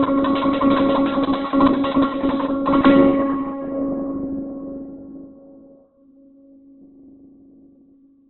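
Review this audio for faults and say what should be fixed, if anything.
Throughout the music, nothing sits above about 4.2 kHz, and the tones sound grainy, rough and noisy rather than clean. This is likely Opus compression at a very low bitrate, consistent with roughly 8 kbps, where the music mode keeps each band's energy but fills starved bands with folded or noise-like content and narrows the bandwidth. A spectrogram shows a hard ceiling near 4.2 kHz with smeared, speckled texture below it instead of crisp harmonic lines. To prevent this, encode at a much higher Opus bitrate so full bandwidth and clean harmonics survive.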